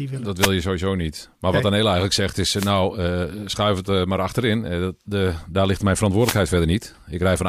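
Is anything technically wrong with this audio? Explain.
Yes, there are wireless microphone noise hits at 0.38–0.51 s (before "je sowieso niet"), 2.55–2.72 s (between "eigenlijk zegt is" and "uh schuif het eh") and 6.18–6.41 s (after "de daar ligt mijn"). The FM radio link fades as reflections cancel, so receiver noise swells into a brief static swish over the speech, rather than the clean gap of a digital dropout.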